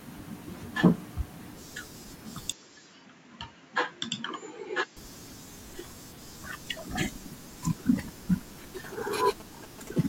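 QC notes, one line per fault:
2.52–4.97 s, input switched to a poorer device: the speech abruptly turns dull and boxy with nothing above 7.6 kHz, drops about 10 dB in level and gains a new noise floor about 45 dB down, with no gap at either switch. Likely a changeover to a narrower-band microphone.
8.84–9.89 s, GSM signalling bursts: a galloping dit-dit-dit of short raspy buzzes, about 15 dB below the speech. A nearby 2G phone exchanging signalling sends scattered groups of radio bursts at 217 Hz, which the audio circuitry rectifies into audible pulses.
9.97–10.04 s, GSM phone buzz: a brief, hard, harmonic-rich buzz at 217 Hz, about 15 dB below the speech and unrelated to it. A 2G phone in call mode transmits steady 217 Hz bursts that the audio circuitry demodulates, here caught just before the end.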